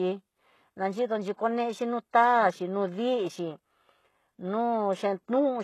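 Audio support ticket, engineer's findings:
Speech throughout: treble gritty and lispy, s sounds metallic, top band detached from the lower harmonics. Hard ceiling near 12.3 kHz. Likely HE-AAC compression; damage plainly audible and fits a low bitrate around 16 kbps. Spectral band replication copies lower bands upward under a coarse envelope, so rebuilt highs misalign with the real harmonics across the crossover.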